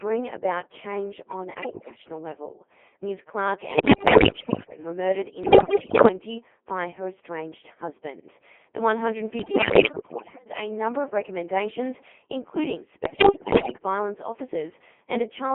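The whole clip runs through a Codec 2 vocoder, and a heavy one at that: the speech comes out robotic and buzzy, squeezed into a band of roughly 250 Hz to 3.4 kHz, with the character of a rate around 2.4 kbit/s. Nothing of the original waveform survives. The decoder is rebuilding the speech from sine waves, using only pitch, voicing, level and a rough spectral shape, so it all has that synthetic, hollow sheen.

On top of that come bursts of bit errors on digital voice radio, at 1.62 to 1.98 s, 3.72 to 4.78 s, 5.44 to 6.08 s, 9.40 to 10.46 s and 13.06 to 13.78 s. Corrupted bits land in the vocoder's frame parameters, so the synthesised speech lurches in pitch and loudness and shifts tone colour, then dissolves into warbles and bleepy gibberish. Most bursts sound like a sizeable share of bits getting flipped. The 5.44 s one is the nastiest, at what sounds like close to a third of bits wrong.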